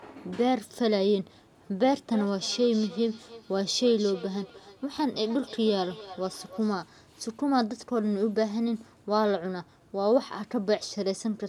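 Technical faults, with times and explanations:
2.12–6.78 s, feedback echo between two devices: speech returns roughly every 300 ms, about 18 dB down, as a nearby second device replays it into a microphone whose echo canceller ignores it.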